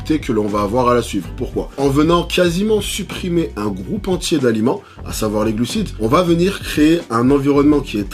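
A faint hiss and roughness rides on the sound throughout, swelling on loud, bright passages and vanishing in silence: sample clock jitter of roughly 3 microseconds, leaving errors about 35 dB below the signal.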